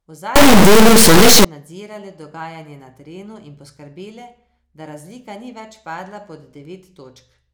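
Integer read as float runs from 0.36 to 1.45 s, just before "nadzirale dogajanje na terenu". It fits 32-bit integer samples read as 32-bit floats, whose values fall near zero or far beyond full scale, so an extremely loud square-wave buzz jumps between silence and clipping.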